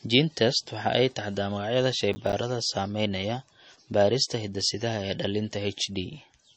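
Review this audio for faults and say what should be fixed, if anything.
Throughout the speech, nothing sounds above 8.3 kHz and the sound is plainly watery, likely from MP3 compression at a low bitrate around 32 kbps. A spectrogram shows a flat ceiling with flickering holes. To prevent it, keep the original file or re-encode at a higher bitrate.

From 2.13 to 2.33 s, processor overload crackle tears through as about five missed 10 ms buffers drop to silence. The waveform shows short hard-edged gaps. To prevent it, lighten the processing load or use a larger audio buffer.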